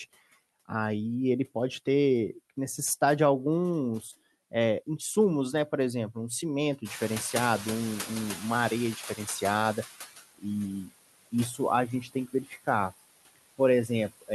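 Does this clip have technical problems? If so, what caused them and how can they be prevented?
Yes. Noise suppressor artifacts run through the whole 14-second clip: the suppressor cuts what it judges to be steady noise by about 18 dB, band by band and frame by frame, so the background dips between phrases and swells under them. Prevention: use a gentler suppression setting or reduce the noise at the source so less processing is needed.

Noise suppressor catching up, from 6.84 to 10.0 s: the room noise jumps by about 18 dB near 7 s, and the suppressor's noise estimate trails it. The louder noise passes through with only about 12 dB of reduction before sinking over roughly 3.2 s. Prevention: a suppressor with faster noise tracking would close that gap.

Speech cut by the noise suppressor, at 11.5 to 11.59 s and 12.02 to 12.68 s: parts of the speech are mistaken for noise and pulled down with it, by up to about 10 dB in the first, shorter spot and about 20 dB in the second, where around a third of a second sounds swallowed. 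The raised room noise sits only about 13 dB below the speech. Prevention: use less aggressive suppression, or keep the microphone closer so speech stands well above the background.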